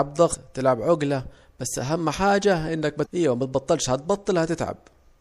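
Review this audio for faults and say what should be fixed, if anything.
Throughout the speech there is a watery, swirling quality with dulled treble and smeared consonant attacks, plainly audible and likely the result of MP3 compression at a low rate, which fits a 64 kbps encode. Short of bits, the encoder cuts the top band and drops weak frequency lines, which flicker in and out between frames. A spectrogram would show a hard ceiling on the high frequencies and patchy, blinking holes below it. Encoding from the original at a higher bitrate, or in a lossless format, would prevent it.

Damaged data in a compressed stream appears twice, each a brief blip of about 45 ms: from 0.30 to 0.35 s, just before "تلعب عجاة بس أهم", and from 3.02 to 3.06 s, just after "بس أهم حاجة إنك". At each point the decoder hits corrupted frames, misreads them and has to regain sync on a later frame header, producing a short glitch. 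On a waveform each appears as a small discontinuity, and on a spectrogram as a narrow vertical smear of broadband energy. Checksummed transfer and storage of the file would prevent this corruption.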